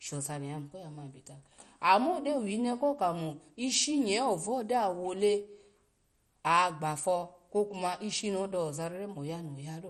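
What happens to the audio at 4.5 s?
At 4.5 s the speech carries the same damage heard across the whole clip. It sounds dull, with a gurgling, granular roughness. Nothing is present above about 13.3 kHz. The likely cause is MP2 compression at a low rate, which fits something near 56 kbps. The coder splits the sound into 32 sub-bands and shares out too few bits. Upper bands drop out and flicker, and the rest are coarsely quantised.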